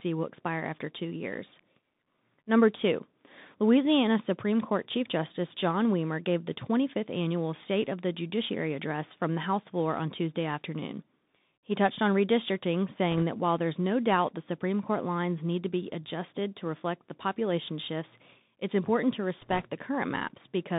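The whole clip has passed through a Bluetooth CVSD headset codec. This narrowband scheme sends a single up-or-down bit per sample with an adapting step size. The band is held to roughly 150 Hz to 3.7 kHz, and the step can't keep pace with loud high-frequency energy, so sibilants come out scratchy and distorted. A granular hiss sits under the speech throughout. The damage is plainly audible and fits a 64 kbps CVSD link.

From 13.11 to 13.23 s, just after "touched on redistricting" and before "that while there's no", bit errors on the Bluetooth voice link flip bits at a rate of around one percent. Each bit carries only a small step and the errors decay, so there are no sharp clicks. Instead a brief rushing crackle is laid over the speech.

A second burst runs from 19.42 to 19.66 s, right after "shifts it's important to". The error rate is somewhat higher here, so the crackly rush is longer and denser.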